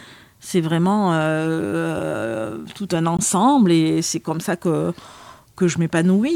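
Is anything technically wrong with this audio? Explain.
Yes. A gap at a join of encoded pieces occurs at 3.17 s, between "tout un" and "et c'est comme ça". Two separately encoded segments were spliced without trimming the encoder's start delay and final-frame padding, so an 18 ms gap with smeared edges interrupts the speech before it resumes where it stopped.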